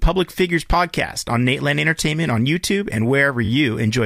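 At 1.98 s a short block of about 8 ms plays twice, and at 3.44 s a 21.3 ms block plays three times in a row, adding about 43 ms. Both are repeated frames: the same compressed data was decoded again, producing a brief stutter. On a waveform the copied segment sits side by side with itself; a spectrogram shows identical slices.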